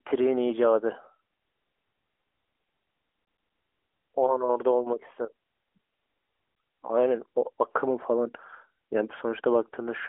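At 3.25 s the CD is stuck on one turn: the laser jumps back to the same spot each revolution, so a 0.12 s slice of speech plays three times with a brief mute at each jump. The fast, even stutter ends at 3.62 s, heard within the narrow AMR-NB phone band.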